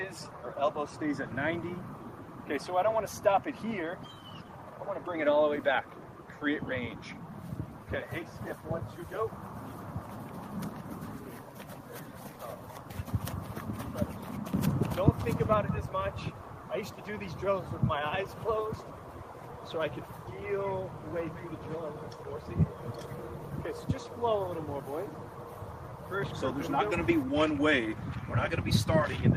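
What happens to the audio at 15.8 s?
Nothing goes wrong at 15.8 s; the audio plays through that point intact, with no dropout, click or distortion.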